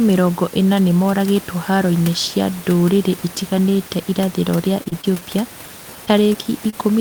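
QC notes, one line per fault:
4.83 to 5.23 s, repeated packet loss with a robotic sound: five gaps in under half a second, the longest about 21 ms, each patched by stretching the last bit of sound. About a fifth of that stretch is filler, so it comes out choppy and robotic, with bits missing.
6.06 to 6.09 s, 6.33 to 6.45 s and 6.70 to 6.74 s, short concealed packet loss: each time about 20 ms of the speech never arrived and the receiver extended the previous sound before blending back in. You hear a quick smear or wobble, and at 6.33 s the stretch runs slightly long.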